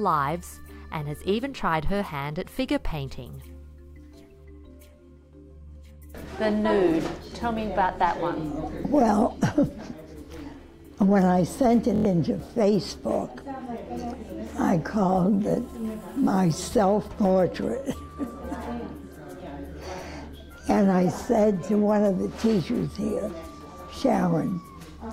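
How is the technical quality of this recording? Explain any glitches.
The recording has one clear glitch, a Bluetooth stutter from 11.96 to 12.05 s, covering about 93 ms. The wireless link dropped or delayed audio, so the receiver kept replaying its last short buffer until fresh data arrived. That gap fits about four lost packets. It sounds like a brief mechanical buzz or stutter, and then the audio resumes further along. On a waveform or spectrogram it shows as a tiny block of identical repeating slices, followed by a jump where the material continues as if it had kept playing.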